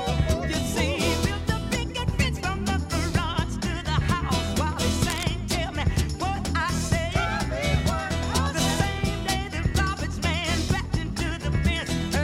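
At about 5.10 s there's a short burst of cable scratch noise, lasting to roughly 5.25 s, so around 150 ms. It's a dense, ragged scratching that sits on top of the sound, fairly prominent at something like 10 dB under the main signal. The likely cause is a worn cable or connector being nudged, with the contact resistance jumping around as it moves and spraying that uneven crackle into the audio for a moment.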